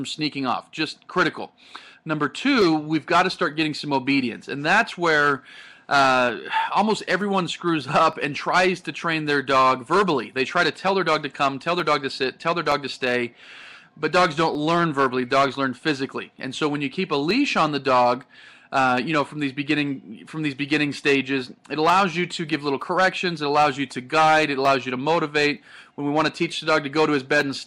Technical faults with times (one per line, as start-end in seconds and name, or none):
0.78-27.41 clock drift buffer slips